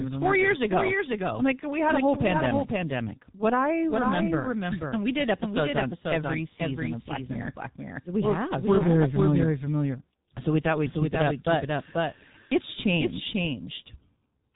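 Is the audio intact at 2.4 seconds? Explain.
No. At 2.4 s, as throughout the clip, the speech is accompanied by a doubled audio track: a second full-band copy trails about half a second behind and about 5 dB quieter, with no decay or room colour. This is likely a second capture path or a misaligned edit. On a waveform, each syllable's envelope reappears, slightly smaller, roughly half a second later.

The same moment also carries heavy G.723.1 codec damage. This low-rate telephony coder, running here at 6.3 kbit/s, passes nothing above 3.8 kHz and updates its coarse voice model slowly, so the speech sounds muffled and hoarse, with smeared consonants. A spectrogram shows a hard ceiling at 3.8 kHz and blurred, blocky harmonics.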